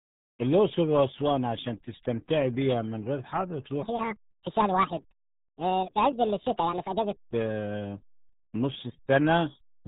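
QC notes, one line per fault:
Throughout: RealAudio 14.4 codec. The speech is muffled and gargly, with nothing passing above 3.8 kHz. The heavy damage and the band-limited tone fit a dial-up-era speech codec running at 8 kbit/s, which discards most spectral detail.
3.83–7.20 s: section at the wrong speed. This stretch plays about 1.57 times too fast, so the speech turns hurried and rises by roughly seven semitones, with speed and pitch shifting together. Likely cause: the segment was resampled or played against the wrong clock.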